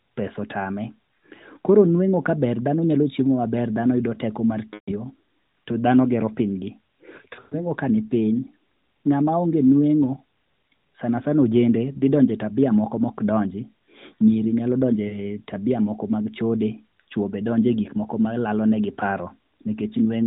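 At 4.74 to 4.92 s, 7.36 to 7.68 s, 11.98 to 12.03 s (between "sanasana ojende" and "donjo e tabia moko") and 15.08 to 15.20 s (after "nyiri nyalo", before "tabia moko"), lost AMR speech frames occur. Corrupted frames are concealed by repeating the last good settings at falling gain. The sound stretches and fades rather than cutting to silence. The 12.0 s loss is a brief dip or warble, and the runs at 4.74 s and 7.36 s smear for about 120 to 140 ms, within the 4 kHz narrowband AMR codec.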